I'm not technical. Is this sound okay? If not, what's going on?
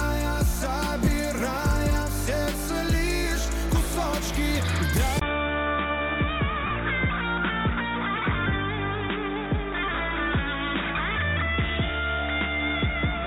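No. Lost LE Audio frames at 1.05 to 1.07 s and 6.66 to 6.71 s: bits of the wireless stream never arrived, so the gaps were filled with a brief noisy smear.

Input switched to a poorer device at 5.19 s: after a short 20 ms silence, the sound turns duller and boxier, with nothing above 3.8 kHz. The likely cause is a switch to a lesser microphone or headset.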